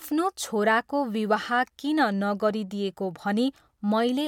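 No technical faults can be heard anywhere in this recording.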